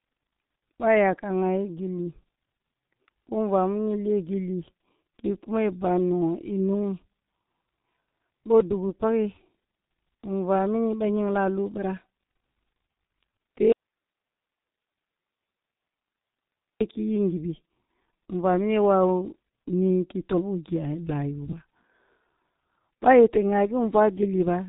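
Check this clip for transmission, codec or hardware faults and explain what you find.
Two faults are present: low-rate codec damage across the whole speech clip, and one long dropout.

Throughout, the speech sounds muffled and hoarse, with smeared consonants and nothing above 3.8 kHz. This is heavy G.723.1 codec damage: its 30 ms frames and slowly updated voice model fit a rate near 6 kbit/s.

From 13.72 s to 16.81 s, the speech cuts off abruptly for about 3.1 s, leaving only faint hiss roughly 55 dB below the speech. This is an audio dropout to a faint residue, likely caused by the signal being lost while the downstream path stayed live.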